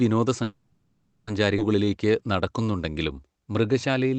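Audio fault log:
0.43–1.29 s, call audio freeze: The speech halts for about 0.84 s. The last sound is stretched into a fading buzz or hiss, with roughly 70 ms of near-silence. This is likely packets held up in transit, draining the jitter buffer. Speech then resumes where it stopped, with nothing lost.
1.57–1.60 s, skip ahead: Playback jumps forward abruptly, with only a tiny join of about 10 ms. Roughly 0.7 s of speech is gone. Later audio had already arrived, so the stalled stretch was dropped to catch up. The two sides butt together almost directly.
1.85–4.15 s, jitter buffer slow-down: The speech runs at about 89% speed, while the pitch stays the same. Sounds are drawn out. The receiver repeated single pitch periods to rebuild its reserve. In total about 262 ms was added.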